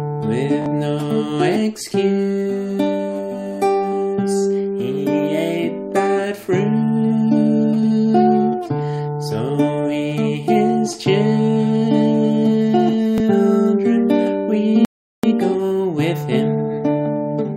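At 0.62 to 0.66 s a repeated buffer is heard: the same 20 ms slice of sound plays twice more with hard joins, giving a quick buzzing stutter. The device didn't get fresh audio in time and replayed the last buffer, costing about 40 ms. A single extra replay of a 20 ms buffer recurs at 13.18 to 13.20 s as a briefer click.

A rebuffering stall follows from 14.85 to 15.24 s. The sound drops into 385 ms of silence while the player waits for more downloaded data, then resumes exactly where it stopped. Unlike the repeated buffer, nothing replays and nothing is skipped. Time is only added.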